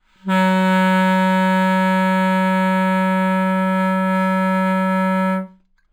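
From start to end, the top of the band sounds dulled, with a faint metallic shimmer riding on sharper, brighter moments. This is imaging from linear upsampling. The audio was raised from 11 kHz to 44.1 kHz by joining samples with straight lines, a weak filter that softens the highs and lets a mirrored copy of the spectrum through. Here the first image sits between about 5.5 kHz and 11 kHz, roughly 30 dB below the sound.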